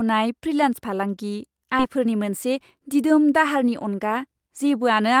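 A stretch of audio was discarded while later audio was already queued, either lost in transit or dropped by an overflowing jitter buffer, so this speech recording contains a skip ahead at 1.79 s. Roughly a second of speech is missing, and nothing fills the gap. The sound on either side is butted together almost directly, so playback lurches forward instead of pausing, and the listener loses whatever was said in that second. Shortly after, from 1.96 to 3.04 s, a jitter buffer speed-up follows. The receiver's buffer was holding more audio than its target, and to trim the excess delay it repeatedly cut out short slices, each one or a few pitch periods long. Across that span it removed about a tenth of a second in total, so the speech runs at 108% speed with its pitch unchanged and sounds slightly rushed until the buffer settles back.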